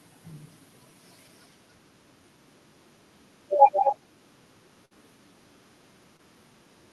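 From 3.73 to 3.96 s, an echo canceller at a loudspeaker end likely failed to remove all of the returning signal. A delayed copy of the speech, trailing by about 225 ms and roughly 10 dB below it, comes back. This is an echo leak.

At 4.85 to 4.93 s, a burst of packet loss left a gap that the receiver covered by extending the last sound for about 53 ms while fading it. A held, dimming buzz or hiss replaces the audio, and about 60 ms of material is skipped before playback resumes.

Between 6.17 and 6.21 s, a short concealed packet loss left about 20 ms of data missing. The decoder invented about 19 ms of continuation from the preceding sound and blended back in, producing a brief smear or wobble in the speech, heard through the Opus call path's band limit near 12 kHz.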